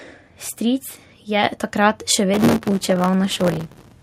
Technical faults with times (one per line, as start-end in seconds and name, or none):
1.44 microphone volume stepped up
2.34-3.92 processor overload crackle